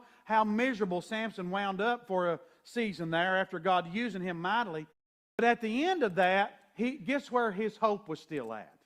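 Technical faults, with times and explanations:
5.33–5.39 s, clipped start after a pause: following a 0.48 s gap after "using him mightily", the output device has gone idle and needs time to wake, so the first 58 ms of sound is swallowed and speech resumes abruptly before "at the end of".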